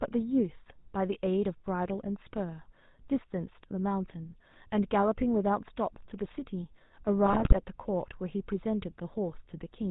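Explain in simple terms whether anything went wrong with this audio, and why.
Two problems are audible. The whole recording went through the GSM full-rate codec, the original mobile-phone speech coder. It rebuilds the voice from a rough model driven by coarse pulses and cuts everything above 4 kHz, so the speech sounds muffled, buzzy and gravelly throughout.

From 7.25 to 7.59 s there are GSM bit errors. A weak radio link corrupted the coded data, and the decoder turned the damaged values into wrong tones and levels. For about a third of a second the speech breaks into squawks and gargling.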